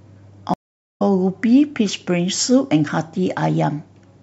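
At 0.54 s the speech cuts to silence for about 0.44 s, and at 1.02 s it returns through a stream reconnect: the connection dropped, the player reconnected and began decoding afresh mid-stream. A plain dropout would resume where it left off. Here the speech picks up roughly a fifth of a second further on, so that stretch is simply missing, and the restart comes in with a brief muted or faded onset from the new decoder.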